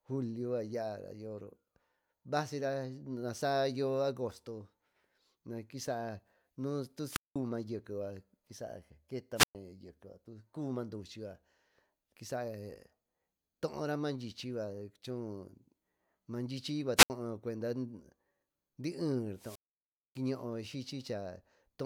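Wireless microphone squelch dropouts occur at 7.08 to 7.36 s, 9.35 to 9.55 s, 16.96 to 17.10 s and 19.33 to 20.21 s. In each, the fading radio signal brings up hiss before the receiver mutes, leaving holes of 192, 116, 71 and 599 ms. That rising hiss sets them apart from abrupt digital dropouts.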